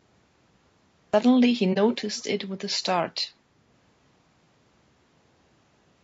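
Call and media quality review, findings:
Cut-off start, 0 to 1.14 s: digital silence, then audio bursts in mid-sound at 1.14 s with no attack or fade. Capture or stream began late, truncating the opening. Source-side start handling, not an in-call dropout.

AAC frame loss with muting, 1.73 to 1.78 s: brief dip. About 30 ms of decoded audio missing, consistent with one lost frame. The decoder zeroed its spectrum and the overlapping windows faded out and back in.

Echo leak, 1.90 to 1.96 s and 2.16 to 2.24 s: short scraps of a delayed copy of the talker trailing the original by about 249 ms. The first is roughly 15 dB under the speech, the second far fainter, around 30 dB down. Likely far-end loudspeaker playback picked up by that microphone and not fully removed by its echo canceller before being sent back.

Low-delay AAC compression, throughout: rough, grainy speech with noise filling between the harmonics and a synthetic-sounding top band, plainly audible. 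Likely AAC-ELD at a low bitrate, around 32 kbps. The short frames resolve pitch harmonics poorly and leave few bits for the highs.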